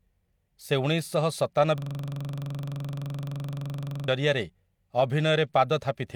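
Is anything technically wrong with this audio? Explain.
Yes. A system hang loop runs from 1.78 to 4.08 s. The playback system stalled while the hardware kept replaying its last buffer, so one 42.67 ms slice, which fits a 2048-sample buffer, repeats 54 times, giving a rattling stutter at 23.4 Hz.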